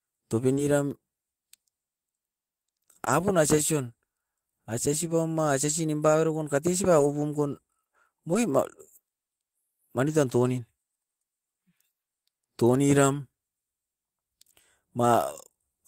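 Short concealed packet loss at 0.53 to 0.59 s: about 40 ms of speech arrived too late to decode, so the receiver extended the preceding sound to cover the hole and then blended back into real audio. The result is a brief smeared wobble. At 3.05 to 3.08 s, a 20 ms hole produces a shorter smear of the same kind.

In the last 20 ms of each of those spots, 0.57 to 0.59 s and 3.06 to 3.08 s, the lost packet was rebuilt from error correction. The next packet carried a coarse low-bitrate copy, and the decoder played that copy instead of guessing. The same repair recurs at 5.69 to 5.71 s, 6.99 to 7.05 s (40 ms, which fits two packets), 8.33 to 8.35 s, 10.07 to 10.09 s and 13.13 to 13.15 s. There is no gap at these points. Instead there is a short patch of rougher, noisier sound.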